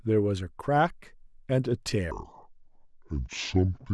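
From 2.11 s to the end, a section at the wrong speed: playback drops to 0.627x, lowering pitch roughly seven semitones, likely from a mismatched clock, so speech turns deep and slow.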